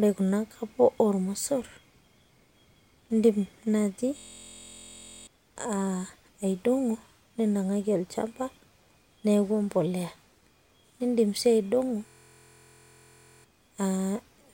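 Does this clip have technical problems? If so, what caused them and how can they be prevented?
Yes. A system hang loop occurs from 4.18 to 5.27 s and from 12.07 to 13.44 s. The system froze while the hardware replayed one 23.22 ms chunk, which fits a 1024-sample buffer. This produces a steady 43.1 Hz buzz and replaces about one and 1.5 seconds of speech. A watchdog that mutes output when the audio thread stalls would prevent it.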